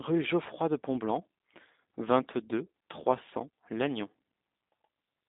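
From start to finish the speech carries plainly audible G.729 codec damage. Nothing passes above 3.8 kHz, and the voice sounds rough and synthetic from low-rate pulse modelling.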